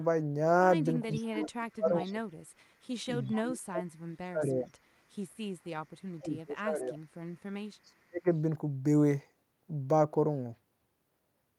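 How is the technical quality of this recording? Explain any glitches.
The recording has repeated dropouts and faint echoes, both pointing to an echo canceller struggling with a speakerphone call.

Speech suppressed in double talk occurs at 1.05–2.21 s, 3.34–4.8 s, 6.17–7.1 s and 7.84–8.26 s. The speech dips by about 35 dB (about 25 dB in the third stretch), likely because the canceller attenuated everything while both parties spoke.

Echo leak appears at 1.12–1.25 s, 2.04–2.13 s and 3.22–3.35 s as brief delayed copies of the speech, about 430 ms late and about 25 dB quieter. This is likely residual loudspeaker pickup that the far end's canceller failed to remove.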